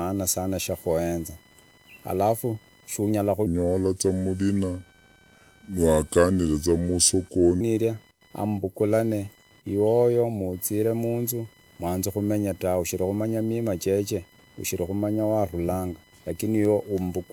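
Computer activity noise runs through the whole speech clip as a buzzing, chirping layer pulsing at around 1 kHz, roughly 30 dB below the speech. Processor or peripheral load changes are disturbing the shared audio ground, so the noise follows machine activity, not the talker.

A section at the wrong speed starts at 3.47 s, right after "alafu kandi shunyala", and lasts until 7.61 s. Playback drops to 0.768 times normal, pulling pitch down about five semitones, so the voice turns deep and slow, likely from a clock mismatch in editing or playback.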